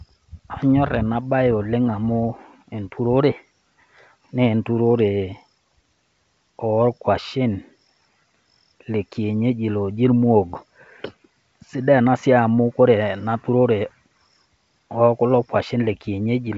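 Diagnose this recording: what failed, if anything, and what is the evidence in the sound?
Nothing here has failed: the speech arrives through G.722 wideband telephone coding at 64 kbit/s, with its bandwidth reaching up to about 7 kHz and at most a faint trace of coding noise in the upper band.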